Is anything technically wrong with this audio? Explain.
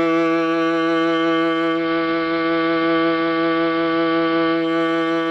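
Yes. From about 1.66 s to 4.76 s the music goes through a digital radio blending to analogue. The receiver loses its digital stream and cross-fades, over roughly a quarter of a second, to the station's AM broadcast, then back. While it's on AM, hiss comes up around 20 dB below the music. The level itself doesn't shift.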